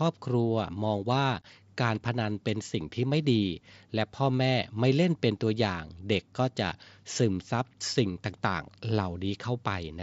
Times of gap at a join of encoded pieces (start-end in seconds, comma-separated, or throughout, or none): none